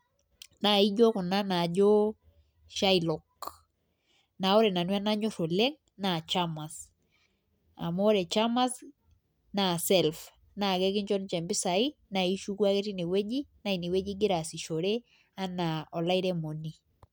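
No technical faults can be heard anywhere in this speech recording. There is nothing to place in time and no cause to point to.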